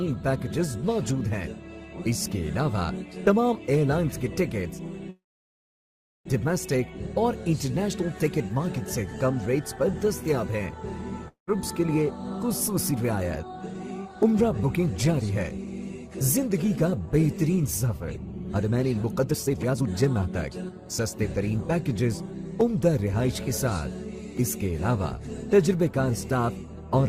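From 5.09 to 6.27 s there is a call audio freeze. The last sound is stretched into a brief fading buzz, and then about 1.06 s of silence follows before playback resumes exactly where it left off. Nothing is lost. The audio is pushed about 1.16 s later. This points to packets that were likely held up in transit, so the jitter buffer emptied and the receiver had to fill the wait.

At 11.28 s a long network dropout begins and lasts until 11.57 s. A short decaying tail of the previous sound gives way to about 0.13 s of silence. The sound then returns further along, with about 200 ms of material gone for good. This is likely a stretch of packets that never arrived, so the receiver concealed the gap briefly and then skipped past the lost portion.

Right after that, from 11.95 to 21.59 s, the jitter buffer speed-up is audible. Playback runs at about 112% of normal speed with the pitch unchanged, which gives a hurried cadence. 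The receiver is draining excess buffered audio by repeatedly cutting out short pitch-period-length pieces. Across this span the cuts add up to roughly a second of removed sound.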